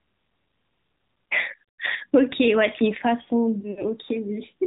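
Throughout, AMR narrowband mobile codec damage cuts everything above 4 kHz and adds a buzzy, synthetic edge that a plain low-pass lacks, fitting a mode near 10 kbps. From 3.60 to 3.85 s, lost AMR speech frames blank 60 ms in runs up to 40 ms, heard as brief warbling smears, not hard silent gaps.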